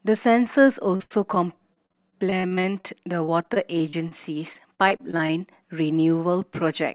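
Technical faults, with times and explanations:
0.96–1.38 s, 1.74–2.86 s, 3.24–4.13 s and 4.53–5.31 s: repeated packet loss (robotic sound). Packets kept dropping in clusters, each hole patched by stretching the previous sound, with the longest gap 83 ms. This gives choppy stretches with pieces missing, heard over narrowband audio with nothing above 4 kHz.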